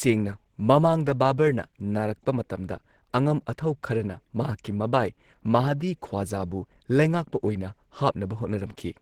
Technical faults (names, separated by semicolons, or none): Opus compression